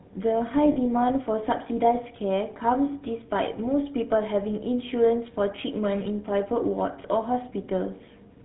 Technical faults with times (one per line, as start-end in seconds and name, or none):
0.00-8.45 GSM full-rate codec
0.72-0.77 lost GSM frames